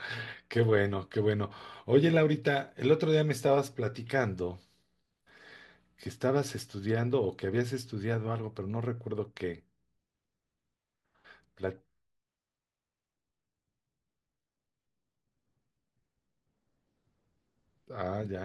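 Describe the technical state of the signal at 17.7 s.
At 17.7 s the speech signal is intact, with no audible dropout, distortion, clipping or other technical fault at that moment.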